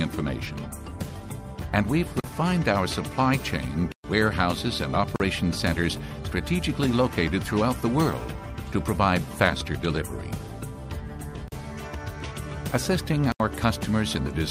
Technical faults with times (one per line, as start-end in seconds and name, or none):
2.20-2.24 block of digital silence
3.92-4.04 block of digital silence
5.16-5.20 block of digital silence
11.48-11.52 block of digital silence
13.32-13.40 block of digital silence